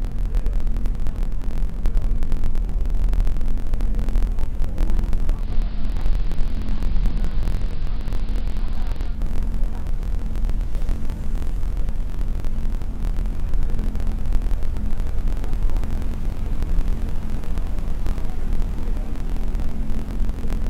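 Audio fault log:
throughout block size mismatch (truncated): A steady 43.1 Hz buzz sits under the sound, which runs 1.12 times fast at about normal pitch. Each block loses its tail because one stage writes longer blocks than the next reads, which fits a 1024-sample read.
5.34–9.22 s digital radio blending to analogue: Over a 204 ms cross-fade the sound drops about 1 dB and gains hiss roughly 30 dB down. The receiver lost the digital signal, fell back to the AM broadcast, then blended back.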